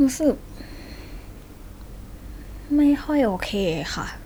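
No technical faults can be heard in this speech recording; the signal carries through without any interruption or disturbance.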